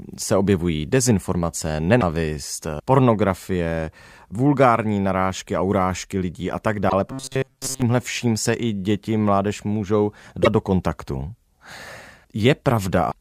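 Damaged data in a compressed stream first appears at 1.97–2.03 s, right after "se objevují dezinformace", and again at 6.86–6.93 s after "urážky lidí a tak". Corrupted frames throw the decoder out of sync, so each spot is a brief disruption while it hunts for the next valid frame header.

Robotic sound from repeated short buffers follows at 7.08–7.82 s. The speech becomes a rigid metallic buzz near 133 Hz. This is likely caused by a roughly 7.5 ms buffer being replayed to cover late audio, so most of the real signal in that stretch is skipped.

Two more damaged-data faults occur at 10.41–10.47 s, between "i děti mládež můžou" and "do kontaktu", and at 13.08–13.14 s.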